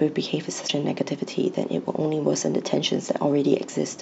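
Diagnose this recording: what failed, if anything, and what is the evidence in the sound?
The codec stage failed: damaged data in the compressed stream produces a brief glitch in the speech from 0.64 to 0.70 s. The decoder misreads corrupted frames and resynchronises on the next valid header. That decoding glitch sets it apart from a network dropout, which leaves silence or a smoothed gap.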